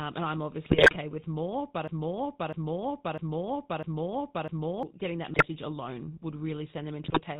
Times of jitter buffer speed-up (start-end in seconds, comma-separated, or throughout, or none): none